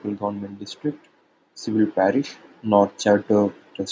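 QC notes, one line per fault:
0.19–3.58 s, automatic gain rising: the gain control judged the input too quiet and ramped up about 5 dB, so the speech and background swell together.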